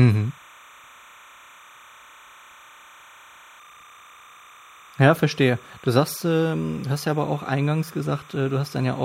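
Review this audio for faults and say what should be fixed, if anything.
Timecode bleed runs through the whole recording. Linear timecode running at 30 frames per second has leaked from an adjacent track or cable into the speech path, and because that code is a square wave flipping between two pitches near 1 kHz and 2 kHz, it adds a constant chirping warble under the speech, sitting around 25 dB below it. It should be removed or the take redone. To prevent it, route timecode on shielded cables kept apart from audio lines and on a track well isolated from program material.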